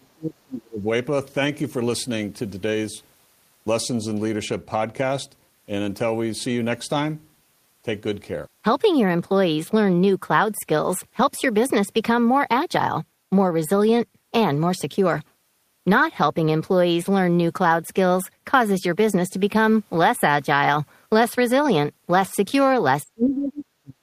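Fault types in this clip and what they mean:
Speech suppressed in double talk: the speech from the start to 0.87 s, and again from 23.04 s to the end, is pushed down hard, by about 30 dB in the opening stretch and about 40 dB at the close, so it dips sharply. The likely cause is an echo canceller clamping down while both ends talked at once. On a waveform the envelope collapses abruptly; on a spectrogram, harmonics and upper bands fade to near-blank patches.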